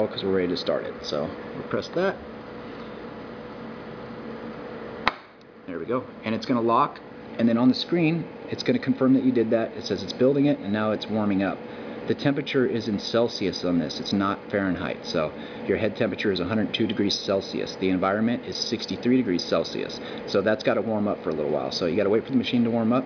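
Nothing goes wrong anywhere in the clip, so there's no technical fault to point to.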